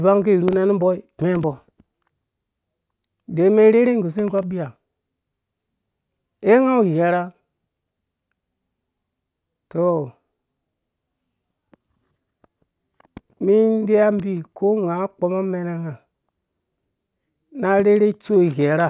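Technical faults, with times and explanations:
Nothing technical stands out here; the speech runs along without any glitch, dropout or odd artefact worth pointing to.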